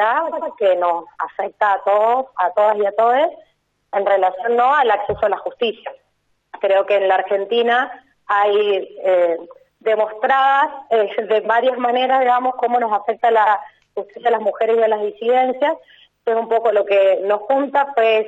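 A stutter at 0.31 s replays the same 93 ms block twice more, and another at 13.46 s replays it once. These are repeated frames: a run that fits four compressed frames was sent again, adding 186 ms and 93 ms.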